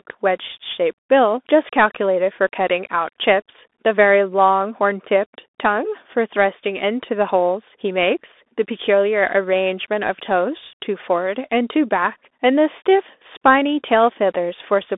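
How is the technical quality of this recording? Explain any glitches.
The quality is poor. A Bluetooth CVSD headset codec colours the speech from start to finish. The sound is band-limited to about 250 Hz to 3.6 kHz, with nothing above 3.8 kHz. The coder sends one bit per sample, up or down, at a rate that fits 64 kbps. Its adaptive step lags fast loud changes, so sibilants turn scratchy and a granular hiss sits underneath.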